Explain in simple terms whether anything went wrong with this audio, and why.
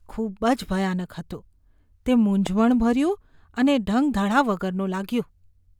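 There's a single loud pop at 2.47 to 2.49 s, a sharp click well above the speech level, likely from a plug, switch or static discharge.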